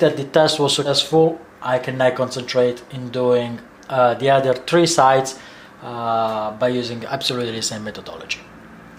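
At 0.85 to 0.90 s the audio jumps forward: compressed frames skipped. A run of encoded frames never reached the output, either missing from the stream or rejected by the decoder as corrupt, so playback resumes further along and roughly 150 ms of sound is simply absent. The gap in continuity fits about seven 20 ms frames dropped together. At the join the sound discontinuity is audible as a short disturbance before the audio carries on.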